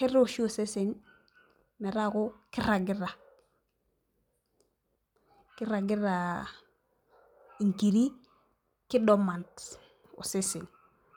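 No technical faults can be heard anywhere in the speech recording, and the signal stays steady and intact throughout.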